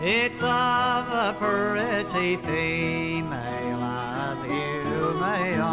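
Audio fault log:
No faults are present in this audio. It comes through a call path whose sound stops at 4 kHz, which fits a G.711 mu-law codec at 64 kbps.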